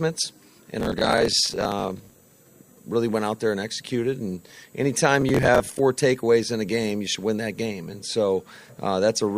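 From 0.80 to 2.25 s, and again from 5.21 to 5.79 s, the audio breaks into processor overload crackle. The processor repeatedly fails to fill its small buffers, of around 10 ms each, in time, and each miss is filled with a stale fragment of earlier audio with hard edges. Dozens of misses in the first burst and about a score in the second merge into a gritty tearing over the sound, which stops once the load eases.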